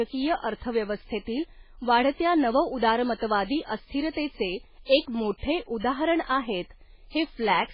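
MP3 compression damage runs through the whole speech clip, with nothing above 5.2 kHz and a watery, swirling texture, likely from a very low bitrate around 16 kbps. Starved of bits, the encoder cut the treble outright and zeroed weak frequency lines that flicker between frames, smearing consonant attacks.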